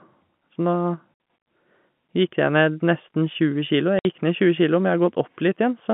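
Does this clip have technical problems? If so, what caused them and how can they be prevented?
Yes, there's packet loss filled with silence. The sound cuts out for 60 ms at 1.14 s and again at 3.99 s, with hard edges where the receiver played nothing for the missing packets. Each gap fits two 30 ms packets. Enabling packet loss concealment or forward error correction would smooth these over.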